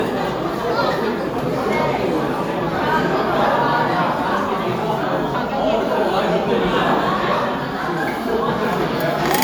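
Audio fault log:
throughout generation loss: the sound has a swirly, smeared, hollow quality, with attacks softened and blurred, more than a single moderate-rate lossy encode would leave, and nothing above 20.1 kHz. This likely comes from repeated lossy coding, with the character pointing to a WMA-type codec at around 128 kbit/s, decoded and re-encoded about four times. Each pass quantises again on a shifted frame grid, so noise and spectral gaps build up.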